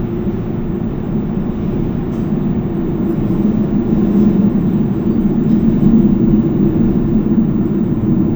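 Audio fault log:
Throughout: stereo read as mono. Alternating left and right samples play as one channel, so the sound runs at half speed and an octave low.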